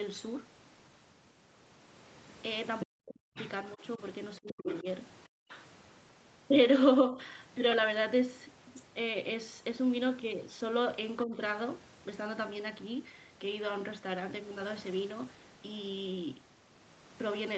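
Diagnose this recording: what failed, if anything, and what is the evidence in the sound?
Other side's voice leaking through at 2.8–3.49, 4.48–4.83 and 5.49–5.62 s, roughly 10 to 20 dB under the speech. This is likely residual echo the call's echo canceller missed.

Speech suppressed in double talk from 2.83 to 4.86 s, dipping by up to around 40 dB. Shorter, shallower dips come at 7.1–7.19 and 11.24–11.38 s. The canceller likely ducked the talker along with the echo.

Background gated by the echo canceller at 5.28–5.49 s. Room sound drops about 40 dB while the loudspeaker plays, then returns. Call-processing stage.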